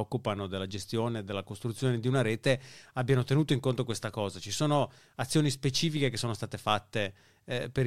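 No dropouts, clipping, glitches or other faults can be heard anywhere in this speech recording.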